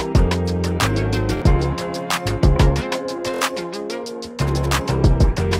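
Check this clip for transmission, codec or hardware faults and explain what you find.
Two repeated-buffer faults are audible. At 1.37 to 1.42 s, one segment of about 23 ms plays twice more, and at 3.34 to 3.41 s, a segment plays three more times. That length fits a 1024-sample buffer. Fresh audio failed to reach the output in time, so the device replayed its last buffer. Each repeat lands with a hard join, producing a short stutter. Roughly 50 ms and 70 ms of audio are lost.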